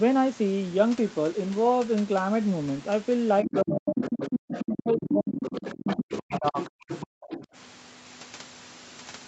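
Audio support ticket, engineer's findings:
Other side's voice leaking through, 3.43–3.61 s, 3.87–6.70 s and 6.88–7.46 s. A second voice sits under the talker, about 10 dB below, and about 15 dB below in the last stretch. Likely cause: the echo canceller on the talker's device, leaving part of the loudspeaker playback in the mic signal. Short scrap first, then one long run, then a quieter tail.

Speech suppressed in double talk, five dips. At 3.43–4.03 s the talker drops by around 30 dB. At 4.61–5.36 s the drop is around 25 dB. At 5.73–6.56 s and at 6.72–6.87 s it reaches around 40 dB. At 7.28–7.38 s it is only around 15 dB. Likely component: the same echo canceller, which treats the talker as echo and attenuates both sides while both speak. The clip is band-limited to 8 kHz, which fits an Opus call path.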